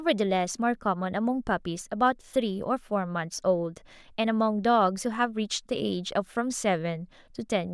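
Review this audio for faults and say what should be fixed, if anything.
Nothing here needs fixing; no faults were found.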